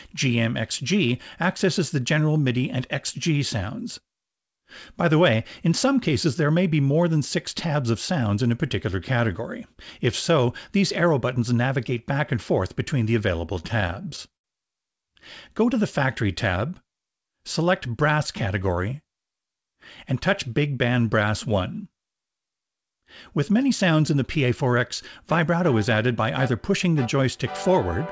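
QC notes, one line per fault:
13.46 to 14.46 s, repeated stalls (stutter): the sound drags and hiccups as twelve brief holds stretch it, the longest about 74 ms, because late packets repeatedly emptied the jitter buffer.
24.16 to 24.74 s, jitter buffer speed-up: the sound briefly hurries, running about 8% fast at unchanged pitch, as the receiver trimmed roughly 50 ms of pitch periods to reduce buffered delay.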